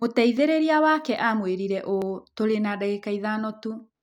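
Three sharp, isolated clicks cut through the speech at 0.37, 1.17 and 2.02 s, each a thin vertical line on the spectrum. They're likely dropped samples: under a millisecond of the stream goes missing, so the waveform jumps abruptly to a later value.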